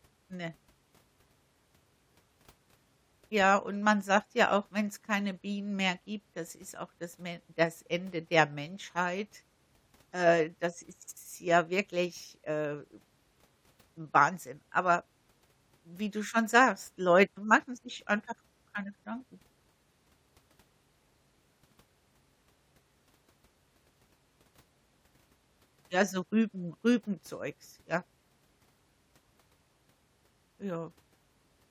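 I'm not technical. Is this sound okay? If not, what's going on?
Yes, it sounds fine.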